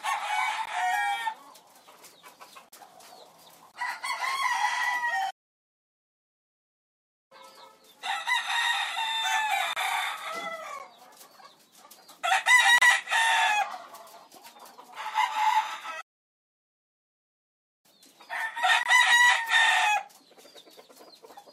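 The clip is a recording of everyday sound, and it has two kinds of dropout. First, there are gaps between stream segments. Short holes of silence with hard edges cut into the sound at 0.66 s, 2.69 to 2.72 s, 3.72 to 3.74 s, 9.73 to 9.76 s, 10.79 s, 12.78 to 12.82 s and 18.83 to 18.86 s. Each lasts between 12 and 36 ms. They fall on a one-second grid, which points to one-second segments whose time stamps don't quite meet. The player fills each gap with silence, and no audio is lost. Second, there are two playback stalls. The sound stops in mid-flow from 5.30 to 7.32 s, about 2.0 s of silence, and again from 16.01 to 17.86 s, about 1.8 s. These are much longer breaks than the segment gaps. The likely cause is the player running out of data or its thread being blocked, so that output stays silent until it recovers.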